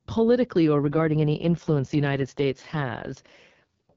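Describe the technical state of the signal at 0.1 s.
At 0.1 s the speech is intact, with no fault present, carried through the AMR wideband (HD Voice) codec at 12.65 kbit/s, a rate at which speech stays clear.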